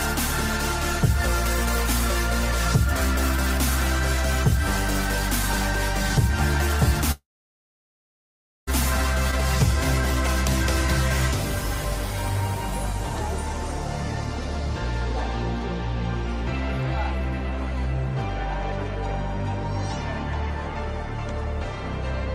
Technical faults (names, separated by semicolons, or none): long network dropout